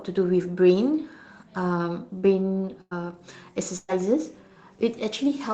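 At 2.81 to 2.93 s and again at 3.77 to 3.90 s the speech smears into a brief held, fading sound before jumping ahead. Both are a burst of packet loss: the receiver stretched the last sound over about 100 ms and 120 ms of missing audio, the second briefly dropping to silence.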